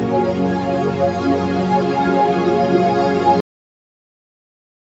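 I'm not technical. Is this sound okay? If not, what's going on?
No, not quite. At 3.40 seconds the sound just stops dead in the middle of whatever it was doing, with no natural fade or tail, and it's pure silence from there to the end. That's a cut-off end. The last chunk of audio never got saved or played, so the recording ends early and abruptly. The thinner, call-style quality comes from normal phone microphone processing, which isn't a problem.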